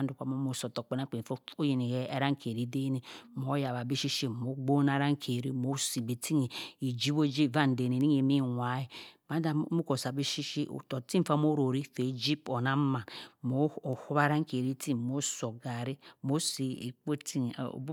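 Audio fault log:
3.68 s, 14.65 s, 17.14 s: dropped samples. Single sharp clicks, the first between "den eh mho" and "bi shi". Likely about 0.2 ms of samples are missing, so the waveform jumps abruptly.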